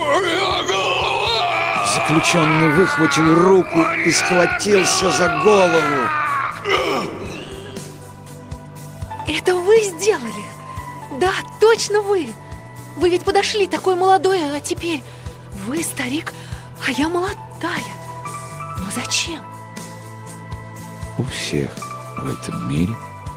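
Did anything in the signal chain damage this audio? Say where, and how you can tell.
No, nothing in the signal chain stood out as damaging this audio when I listened to it.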